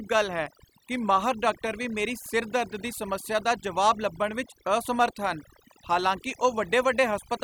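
Throughout the clip, overdone noise removal is at work: the noise reduction was set too aggressively, so frequency bands sitting near its noise estimate are pulled down or cut entirely. Quiet parts of the speech vanish with them, leaving near-silent gaps flecked with twinkling specks.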